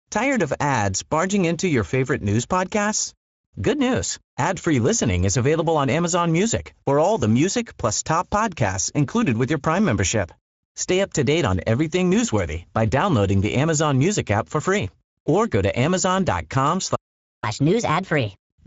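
The whole clip carries Speex codec damage: speech sounds hoarse and grainy, nothing above 7.6 kHz, which fits a mid-rate setting around 17 kbps.

At 16.95 s a playback stall cuts the speech dead for about half a second, until 17.44 s, likely from the player running dry.

From 17.44 s to the end there's catch-up at higher speed: the player runs 1.25 times fast to burn the backlog, lifting pitch roughly four semitones.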